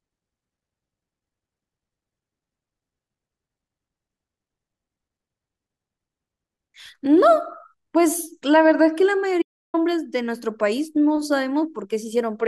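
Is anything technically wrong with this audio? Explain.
Yes. From 9.42 to 9.74 s the speech hits an audio dropout to silence lasting about 0.32 s, likely from the input briefly disconnecting or muting while recording continued. The sound stops abruptly with no room tone, appearing as a flat line on the waveform and an empty black band on the spectrogram.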